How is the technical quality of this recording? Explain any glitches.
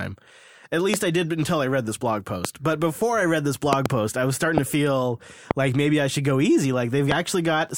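The recording is marred by loud pops, six in all: 0.94–0.96 s, 2.45–2.47 s (right after "I read this blog"), a double pop at 3.73–3.88 s, 4.58–4.60 s (between "post I was starting" and "to feel like maybe"), 5.51–5.53 s (between "was starting to feel" and "like maybe I should"), and 7.12–7.14 s. Each is a sharp snap roughly 20 dB above the speech, which carries on underneath. They're likely voltage spikes from a connector, switch, static or driver glitch getting into the signal path.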